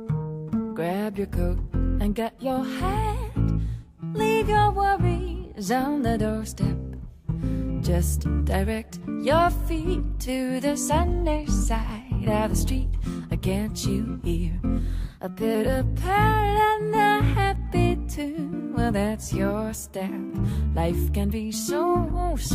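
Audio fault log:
15.03–15.55 s, drift correction step: playback runs 5.9% fast and pitch rises 99 cents, about a semitone, before snapping back. This is likely a clock-matching resampler briefly speeding up to drain its buffer. On a spectrogram, every harmonic jumps upward together, then drops back.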